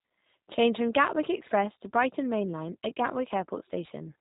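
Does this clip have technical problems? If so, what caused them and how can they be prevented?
Yes. G.729 codec damage runs throughout: nothing above 3.8 kHz survives, and the speech sounds rough and synthetic, consistent with 8 kbit/s pulse-based frame coding. Prevent it by using a wideband codec such as Opus.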